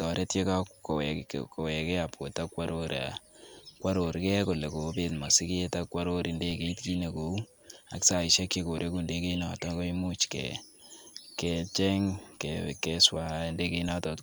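At 6.51 s, just after "ak kworor", and again at 13.89 s, a DC step shifts the waveform's zero line by about -35 dBFS, then drains away through a 20 Hz high-pass. Each gives a low thump; the waveform shows a sudden baseline jump, the spectrogram a brief low-frequency smear.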